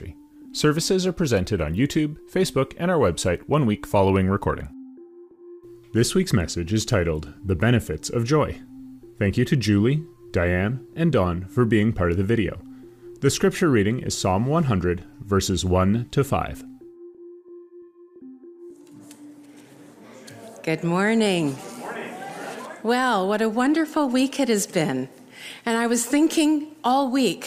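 No technical faults are audible anywhere in this audio.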